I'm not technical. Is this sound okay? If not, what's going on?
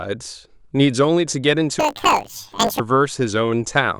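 No. From 1.80 to 2.80 s the speech turns into a robotic buzz. That's planar audio read as interleaved: the stereo data gets scrambled in 20 ms chunks, buzzing 50 times a second.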